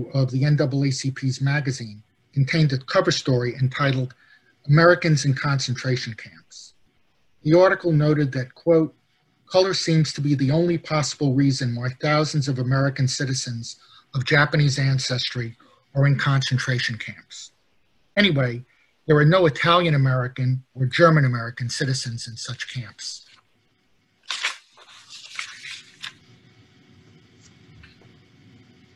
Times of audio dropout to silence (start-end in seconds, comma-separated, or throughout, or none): none